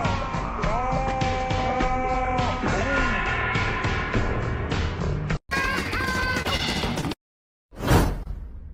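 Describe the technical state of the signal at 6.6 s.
Around 6.57 to 6.61 s there's a short concealed packet loss: about 20 ms went missing, and the decoder extended the preceding sound to cover it, leaving a brief smear.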